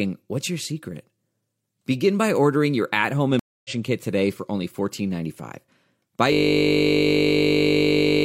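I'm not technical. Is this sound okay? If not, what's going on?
No. At 3.39 s a stream reconnect happens: the connection dropped and the player restarted partway through. After "ordering your at home" there's about a quarter-second of silence, then the speech resumes roughly a fifth of a second later, at "kit today for only", skipping a sliver.

From 6.33 s to the end, a system hang loop takes over: the computer froze while the sound hardware kept replaying the same tiny 20 ms snippet nearly a hundred times. The speech is replaced by a steady buzz repeating 50 times per second.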